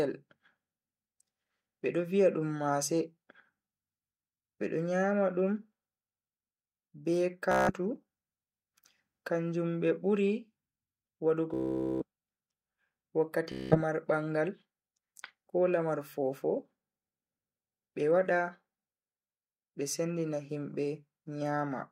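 Bluetooth stutter: audio packets arrived late or not at all, so the receiver kept replaying its last short slice of buffered audio. This produces buzzing, machine-gun repeats at 7.52–7.73 s, 11.54–12.04 s (the longest, losing nearly half a second) and 13.52–13.78 s, and scattered brief repeats at 19.14–19.33 s just before "be sendina himbe". Each time, the speech jumps ahead as if it had kept playing.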